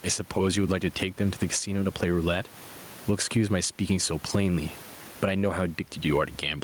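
Gain pumping runs through the whole speech clip. The room noise sits about 32 dB below the speech. The level swings by around 15 dB. The likely cause is input gain set far too high, with a fast limiter clamping down.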